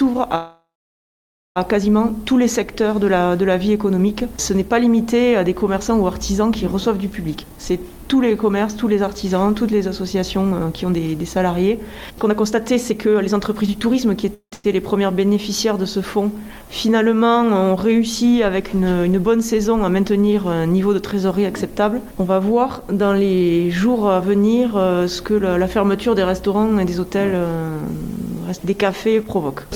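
Right at the start, from 0.35 to 1.58 s, there's a call audio freeze: the last bit of sound drags on as a fading buzz, then about 0.9 s of silence, likely because delayed packets left the jitter buffer empty. Nothing's lost; the sound just resumes 1.2 s late.

From 7.36 to 11.70 s comes a jitter buffer speed-up: the receiver trims tiny pitch-period slices to shed the built-up delay, so the sound runs about 7% fast at unchanged pitch, roughly a third of a second gone. It rushes harder from 12.11 to 14.25 s, around 19% fast, losing about 0.4 s.

Two short freezes follow back to back, 14.34 to 14.54 s (with a brief silent stretch) and 14.54 to 14.66 s, adding about 0.18 s and 0.1 s of delay.

Milder speed-ups come at 19.36 to 20.12 s (about 6% fast) and 26.63 to 29.65 s (about 8%, roughly 0.2 s trimmed), both sounding slightly hurried.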